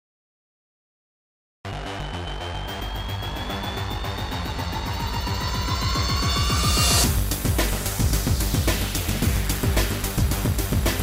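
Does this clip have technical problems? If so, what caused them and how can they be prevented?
Yes. There is a cut-off start. The clip holds digital silence from 0.0 to 1.65 s. At 1.65 s the sound jumps in mid-event, with no natural attack or fade. Capture began late and missed the opening. Start recording early, with some pre-roll.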